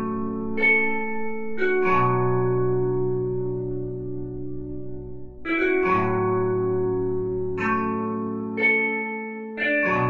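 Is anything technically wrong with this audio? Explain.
No, nothing technically wrong can be heard in this recording of sounds. The audio stays intact and steady throughout, with no faults to point to.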